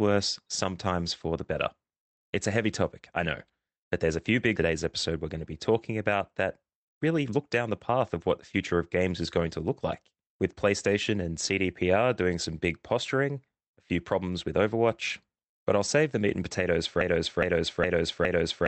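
At 6.62 s, right after "be talking about that", a jitter buffer speed-up begins. It lasts until 7.90 s, just before "of what the future". The receiver's buffer had built up more delay than it wanted. To drain it, short slices of one or a few pitch periods were cut out, again and again. Roughly 150 ms went missing. The speech runs at about 111% speed with its pitch unchanged. It sounds briefly rushed.

At 17.01 s, after "the meat and potatoes", a broken-record loop starts. A fragment of 0.41 s plays back to back, exactly the same each time. It repeats four times and runs on to the end of the clip. The likely cause is a stall upstream that left the player resending the last piece it held. Whatever should have followed is lost.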